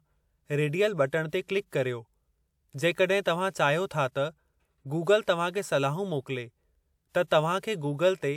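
Nothing in this short bit of speech trips any alarms, so there's no fault to point to at any moment along the way.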